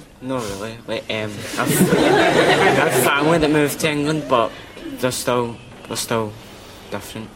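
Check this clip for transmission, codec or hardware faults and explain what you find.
One fault: an underrun with held sample at 6.31 s. The output buffer emptied for about 2 ms, and the converter froze on its last value, so the waveform shows a short flat line. Roughly 2 ms of audio was lost while playback was stalled.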